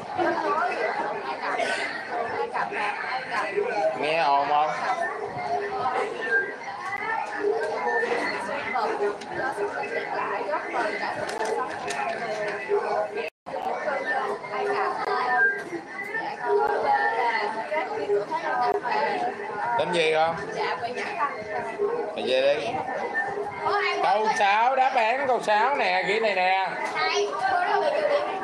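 At 6.97 and 11.38 s, then from 15.05 to 15.07 s, at 16.67 s and from 18.72 to 18.74 s, the sound drops to a block of digital silence, each gap lasting about 13 to 20 ms. Zeros were played in place of the audio, and the sound cuts out and back in with no fade. The shorter gaps are heard as ticks and the 20 ms ones as a pop or short hole. Unlike a faded or concealed dropout, there is no smoothing and nothing is filled in, just a silent gap.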